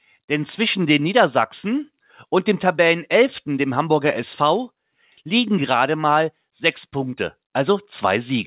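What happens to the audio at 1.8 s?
Nothing goes wrong at 1.8 s: the audio is intact there, carrying only the narrow telephone bandwidth and usual coding noise of the call path it came through.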